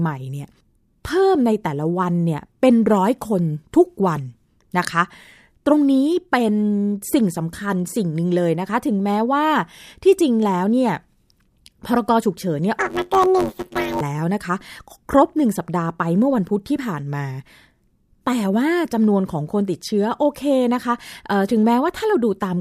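From 12.79 to 14.01 s the speech turns into a robotic buzz at about 94 Hz. This is planar audio read as interleaved. Each 10.67 ms block, which fits a 512-sample buffer, plays twice at double speed. The blocks are short, so there is no clear octave shift.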